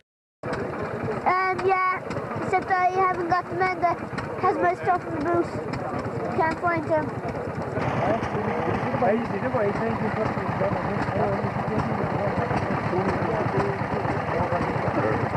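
At 6.44 s there's a short patch of DAB burbling, lasting until about 6.52 s, so roughly 70 ms. Weak reception let bit errors slip past the error correction into the MP2 stream, at a rate of around a tenth of a percent. Corrupted samples put short blips of noise into individual sub-bands for a short run of frames, and you hear that as a quick burble sitting on top of the audio.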